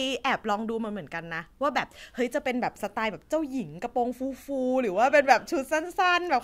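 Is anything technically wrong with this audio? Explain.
No, nothing is technically wrong with this audio.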